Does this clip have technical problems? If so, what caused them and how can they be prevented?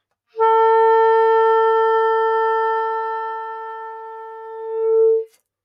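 Yes. A noise suppressor applied to music or sounds runs through the whole clip. It treats steady, sustained parts of the sound as noise, so level swings by around 15 dB and the sound pumps and thins. Unlike compressor pumping, it follows steadiness, not loudness. Bypass speech-oriented suppression for non-speech material.

The sound is cut by the noise suppressor from 2.98 to 4.84 s and again from 5.2 to 5.36 s, sinking by up to about 14 dB. Unlike a fade or dropout, sustained portions and tails sink while onsets survive. Disable suppression or use a music-aware mode.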